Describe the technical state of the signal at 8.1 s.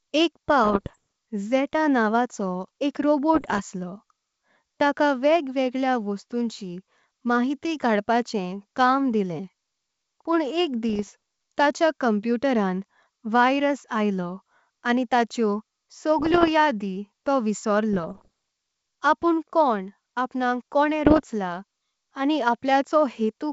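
At 8.1 s the audio is intact, with the speech carried through G.722 wideband telephone coding at 64 kbit/s and any coding damage there faint at most.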